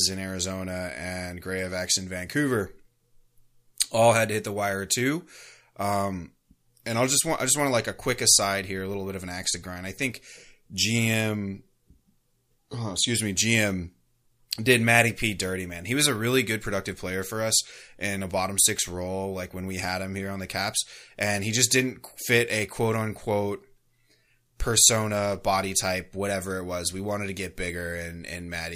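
Nothing is technically wrong with this speech recording.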